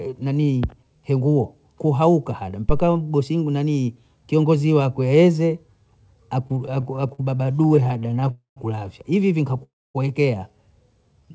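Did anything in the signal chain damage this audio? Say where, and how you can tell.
Yes. An analogue phantom power thump hits at the input stage from 2.69 to 2.92 s. A supply switched on a live input sent a deep step through the coupling capacitors, decaying in about 52 ms.

Repeated stalls (stutter) run from 6.48 to 8.31 s. Dozens of brief holds, none longer than 50 ms, stretch the speech. The network delivered packets late, and the jitter buffer kept emptying. Nothing is lost.

Two call audio freezes follow, at 8.31 to 8.58 s and 9.63 to 9.96 s. Each held sound fades into silence of about 130 and 250 ms. A network hold-up that drained the jitter buffer is the likely cause.

A jitter buffer slow-down closes the clip from 11.13 to 11.32 s. Repeated pitch periods add 49 ms, so the speech plays at 80% speed with unchanged pitch. The buffer was rebuilding its reserve.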